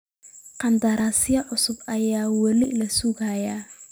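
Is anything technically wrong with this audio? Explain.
Yes. There are two sudden skips, at 1.0 s and 2.64 s. Each is a jump in the speech, and roughly 40 ms goes missing each time. The likely cause is a dropped buffer (overrun). Samples were overwritten before being read, and the remaining audio was spliced together.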